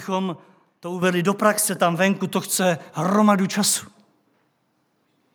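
At 1.02 s the microphone volume is stepped up: the level of the whole recording jumps by about 7 dB in a single step, just before "do praxe tam". The speech and the background noise rise together, which points to the input gain being raised at the device rather than the talker moving closer. The call software evidently judged the microphone too quiet and raised the input volume in one step, leaving an abrupt loudness change.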